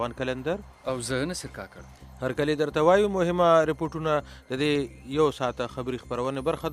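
From 3.86 to 6.35 s the audio has periodic USB or driver dropouts. Tiny slivers, well under a millisecond, are skipped every 0.1 s, giving regular ticks.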